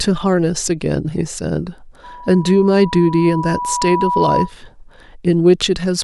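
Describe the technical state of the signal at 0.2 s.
At 0.2 s the speech signal is intact, with no audible fault at that moment.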